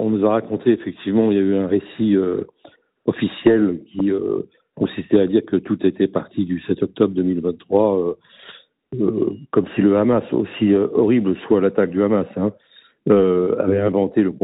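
Nothing goes wrong here; the sound comes over a WebRTC call path whose band stops at about 4 kHz, as you'd expect from G.711 mu-law at around 64 kbps, and that's simply how a call like this sounds.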